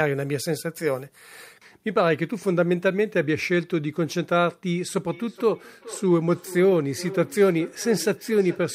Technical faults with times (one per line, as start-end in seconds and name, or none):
4.99-8.75 feedback echo between two devices